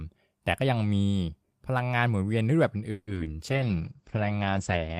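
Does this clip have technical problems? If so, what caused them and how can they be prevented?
Yes. At 2.91 to 3.09 s a call audio freeze holds the last sound as a fading buzz or hiss for about 160 ms. The likely cause is packets stalling in the network and the jitter buffer running dry, with nothing lost. A deeper adaptive jitter buffer prevents it.

Short concealed packet loss follows at 3.15 s and again at 3.24 to 3.28 s. Each time, about 20 ms never reached the decoder and was patched from the preceding sound. The patches are heard as a brief smear. Forward error correction or redundancy prevents this.

From 3.46 s to the end, a call bitrate drop takes the stream from 32 to 10 kbps. The top end narrows from 20 kHz to 8 kHz, and the sound becomes rough and muffled. Better bandwidth headroom or a higher minimum bitrate prevents it.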